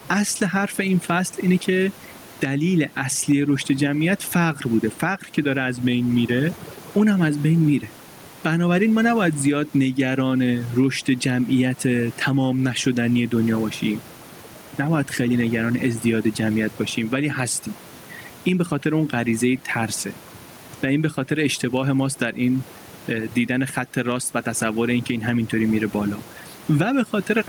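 From start to end, overdone noise removal is at work. The noise reducer was set too hard. It shuts off single frequency bands near its noise estimate, taking quiet parts of the speech with them. Gaps sink to near silence with twinkling specks.

Gain pumping also runs throughout. The gain swings by roughly 10 dB. Loud and soft parts sit close in level, so the sound is squashed. The likely cause is gain set far too high, with a fast limiter pulling it down. The room noise sits about 31 dB below the speech.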